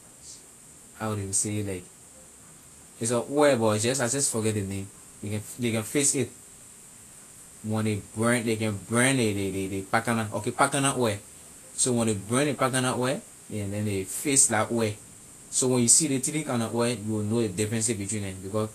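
All the way through, the speech carries plainly audible damage that points to Vorbis compression, likely at a low rate fitting around 35 kbps. Nothing survives above 14.2 kHz, and the remaining treble is so coarsely quantised that it turns hissy and grainy, with roughened consonant detail.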